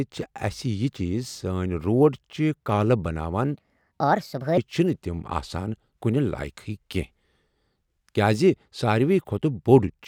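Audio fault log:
3.55–4.58 s, section at the wrong speed: the speech runs about 1.47 times too fast, so it sounds hurried and roughly seven semitones high until "چھِ نہٕ تِم آسان". Tempo and pitch jump together, unlike a pitch shift, which leaves timing intact. The likely cause is playback against the wrong clock.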